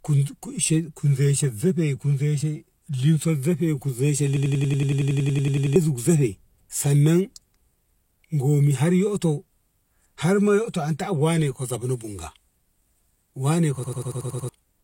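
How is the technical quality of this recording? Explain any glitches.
The recording has two glitches, both from a system hang loop, at 4.37–5.76 s and at 13.84–14.49 s. In each, the machine stalled while the audio hardware kept replaying the same ring buffer. A 93 ms slice repeats about 15 and 7 times respectively, which fits a 4096-sample buffer, giving a rapid machine-gun stutter at 10.8 Hz. Roughly 1.5 s and 0.7 s of speech are lost. On a waveform or spectrogram, identical blocks tile side by side with sharp vertical seams every 93 ms.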